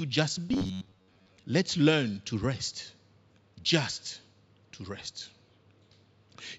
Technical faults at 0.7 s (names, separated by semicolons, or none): robotic sound from repeated short buffers